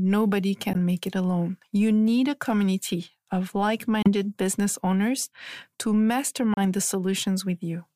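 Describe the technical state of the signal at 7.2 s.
At 7.2 s the speech signal is intact, with no audible technical fault at that moment.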